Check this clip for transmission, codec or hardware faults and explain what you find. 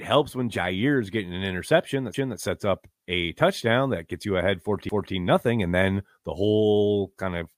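There's one fault here: overlapping chunks, heard twice in the speech. From 2.14 to 2.39 s, after "getting an interception that", and again from 4.89 to 5.14 s, after "that gets you ahead", a 250 ms slice plays a second time. The audio was handled in 2.5 s chunks, each starting a quarter-second before the previous one ended, so every join replays that overlap. It comes across as a stutter and click at each seam.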